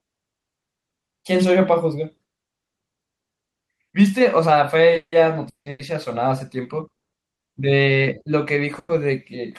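Repeated stalls (stutter) run from 4.93 to 5.81 s in this speech recording. Audio arrived late four times, so the buffer ran dry and the receiver stretched the last sound to fill 430 ms, about half that span. The longest wait is 170 ms, and nothing is lost, but the passage drags and stutters. Call audio freezes follow at 6.97 to 7.14 s, a 150 ms drop into silence, and at 8.79 to 8.91 s, a 100 ms held sound that ends in a brief silence. Each likely comes from a delivery hold-up that emptied the buffer, and the audio resumes where it stopped, inserting a gap without losing anything.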